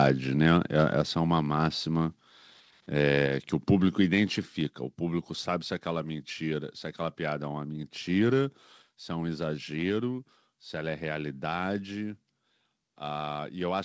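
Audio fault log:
1.02 s and 8.82 s: microphone volume stepped down. Each time, speech and background fall together by about 3 dB in one step and stay lower. This is likely the call software cutting the microphone's input gain at once, not a gradual fade.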